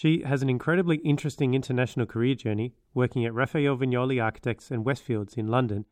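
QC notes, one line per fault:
No fault found in this clip, so there is nothing to log in these QC notes.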